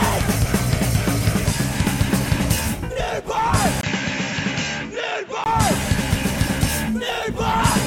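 At 3.81 s the music drops out for 20 ms. It returns duller and a little quieter. Nothing passes above 7.6 kHz, and faint new background noise appears. It clears again at 5.46 s. This is likely an input switched to a poorer device.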